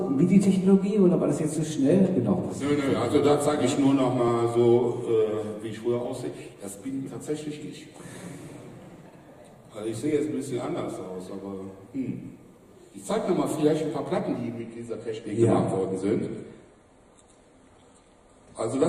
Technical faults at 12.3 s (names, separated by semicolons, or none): none